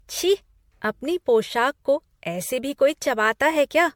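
Generation loss runs throughout this speech clip, from start to finish. It has a swirly, smeared and hollow quality deeper than a single lossy encode would give, with softened attacks and nothing above 19.8 kHz. The likely cause is repeated MP3 re-encoding, about seven passes at a rate consistent with 96 kbit/s. Each pass quantised again on a shifted frame grid, so noise and spectral gaps piled up.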